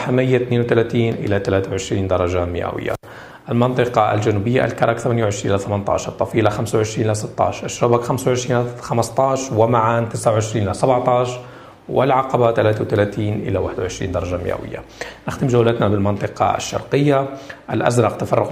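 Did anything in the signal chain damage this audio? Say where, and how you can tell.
No, nothing in the chain audibly damaged this audio; the signal arrives intact at every stage from capture to playback, with no point where the sound breaks, distorts or changes character.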